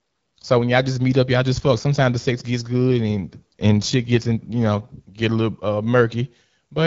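From 2.93 s to 5.26 s the speech grows rougher and more synthetic, with no gap or narrowing of the band. This is an AMR rate drop: the codec stepped down, which fits a fall from 12.65 to 8.85 kbit/s, spending bits on error protection.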